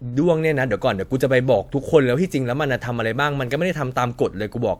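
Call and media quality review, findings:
No audible faults found.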